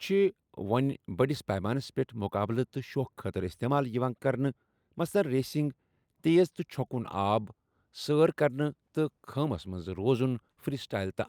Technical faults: none

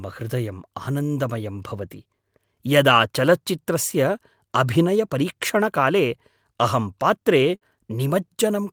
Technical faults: burst of packet loss

